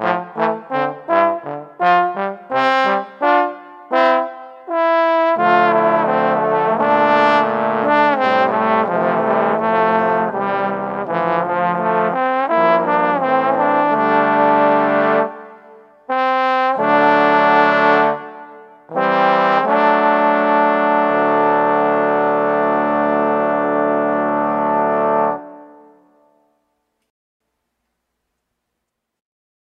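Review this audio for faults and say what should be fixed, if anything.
Rebuffering stall at 27.10 to 27.40 s: the player exhausted its downloaded audio, fell silent for about 0.3 s, then picked up exactly where it stopped, so nothing is lost but time is added. Prevent it with a larger playback buffer or adaptive bitrate switching.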